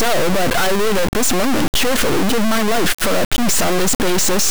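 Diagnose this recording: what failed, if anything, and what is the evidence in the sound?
Integer read as float, throughout the speech: a sample-format conversion fault. The 32-bit integer samples were read as 32-bit float, so each value lands near zero or far past full scale. The result is a harsh, clipped square-wave buzz that drops to silence in the quietest passages.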